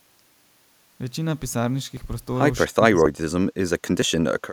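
At 1.97 s the speech makes a small forward jump, with roughly 10 ms missing and the two sides spliced with no gap. The same skip recurs at 3.06 s and 4.02 s, likely a dropped buffer (overrun), where samples were overwritten before being read.

From 2.65 to 3.46 s the speech dips sharply, by as much as roughly 40 dB, for most of that stretch. This is likely speech suppressed in double talk: the echo canceller could not tell this talker from the returning echo and attenuated both.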